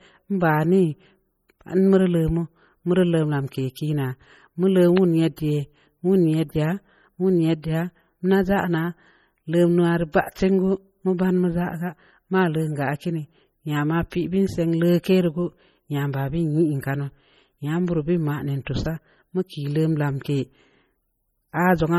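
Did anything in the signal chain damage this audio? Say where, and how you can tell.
Yes, at the codec stage. Throughout the speech there is heavy MP3 compression damage: a watery, swirling texture with chirpy, metallic edges on s sounds and smeared consonant attacks, which fits a low bitrate of about 32 kbps. The likely cause is an encoder starved of bits, zeroing weak frequency lines so they flicker on and off between frames. Unlike network packet loss, nothing drops out. The smearing is continuous, and content reaches up to 20.9 kHz.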